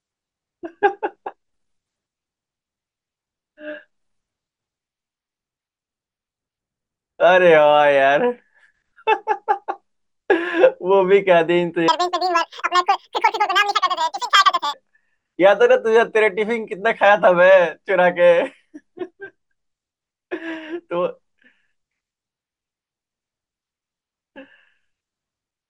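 From 11.88 to 14.73 s, a wrong sample rate plays the speech at double speed, an octave higher. This fits 22 kHz audio played back at 44.1 kHz.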